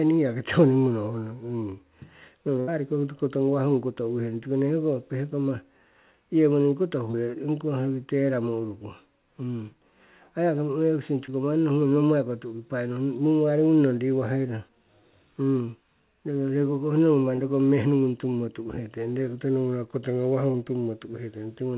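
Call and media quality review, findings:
Burst of packet loss, 2.60–2.69 s: roughly 73 ms of the last received sound continued and faded by the jitter buffer's concealment, then playback resumes about 80 ms further on, skipping the audio in between. Probable component: network/receiver. Audible as a held, decaying smear followed by a jump.

Short concealed packet loss at 7.11–7.15 s, 11.25–11.30 s, 17.36–17.40 s, 19.14–19.18 s and 20.52–20.56 s: each about 20 ms missing, bridged by roughly 20 ms of extrapolated signal blended back into real audio. Heard as brief smears or wobbles. Probable component: network/jitter buffer. The band stops at 4 kHz, consistent with a 64 kbps G.711 mu-law call path.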